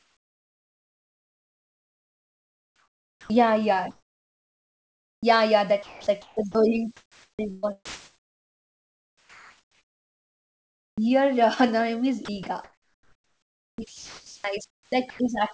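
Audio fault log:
0.00–3.30 s and 3.91–5.23 s, comfort noise in place of the background: In both pauses, the second ending just before "yeah yeah", the room tone gives way to a smooth, steady hiss with no texture. It sits about 9 dB and about 6 dB below the real background, which itself is about 43 dB under the loud parts. This is likely discontinuous transmission, with the receiver synthesising filler. It differs from a noise gate because the pause never goes silent.
3.15 s, onset clipped by the voice detector: Sound begins abruptly at 3.30 s because its first 150 ms is missing and the synthetic hiss runs right up to the hard start. The likely cause is the sender's detector reacting late, so those opening moments were never sent. A fade-in or gentle gate would leave a soft, rising attack. Here there is none, and the missing stretch is filled with comfort noise rather than silence or a glitch.
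5.83–6.55 s, 6.97–11.10 s, 12.25–15.19 s, sound chopped by the voice detector: Quiet edges and soft passages drop out repeatedly. About 420 ms, 3.7 s and 2.1 s are replaced across these stretches. This is likely the detector toggling on and off. Packet loss would bring clicks, repeats or metallic concealment, whereas these gaps fill with smooth noise and the call codec keeps everything below 8 kHz.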